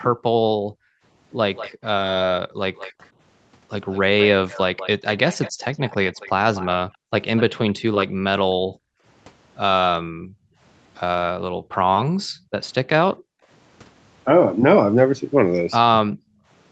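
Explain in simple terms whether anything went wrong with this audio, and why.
Background gated by the echo canceller, from 0.2 to 2.6 s, 6.9 to 13.4 s and 16.1 to 16.5 s: while the loudspeaker played, the echo canceller turned this microphone down sharply, so the room sound nearly vanishes in short dips, adding up to well under a second, then about two seconds, then a brief moment at the end.

Echo leak, from 1.55 to 7.42 s: a faint, much quieter copy of the speech trails the original by about 0.19 s. This is likely because one side's echo canceller didn't fully remove what its microphone picked up from the loudspeaker, so the leftover was sent back.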